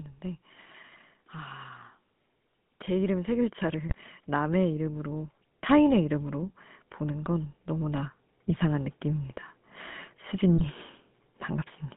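Throughout, the GSM full-rate codec gives the speech a buzzy, gravelly roughness within a 150 Hz to 3.5 kHz band, which fits 13 kbps GSM rather than a merely band-limited line. From 2.86 to 9.36 s, automatic gain rising lifts the level by about 12 dB. The background swells with the voice, so this is not a speaker growing louder. GSM bit errors at 3.89 to 3.96 s and 10.55 to 10.67 s produce brief squawks and gargling from corrupted decoder values, not the silent gaps of dropped packets.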